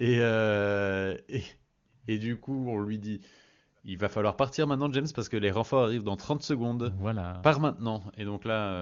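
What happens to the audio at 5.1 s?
Nothing goes wrong at 5.1 s: the speech passes through intact, carried by the AMR wideband (HD Voice) codec at its top rate of 23.85 kbit/s, where any coding damage is faint at most.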